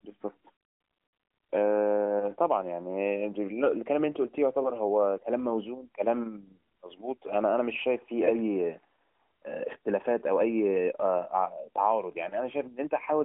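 Listening through this speech recording over its narrowband AMR mobile codec path, with nothing heard above about 3.7 kHz, nothing stood out as a technical problem.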